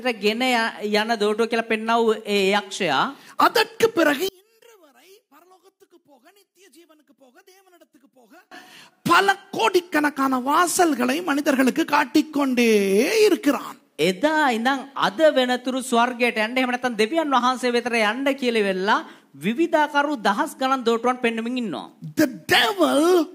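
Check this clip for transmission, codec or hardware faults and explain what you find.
There's one clear fault. Between 4.29 and 8.52 s the sound collapses, dropping by about 34 dB and leaving only a faint residue before it snaps back to full level. That pattern points to one channel inverted: the most likely explanation is that one stereo channel has flipped polarity. Once the two channels are folded to mono, everything they share cancels, and all that survives is the small difference between them. That's why it sounds faint rather than fully silent.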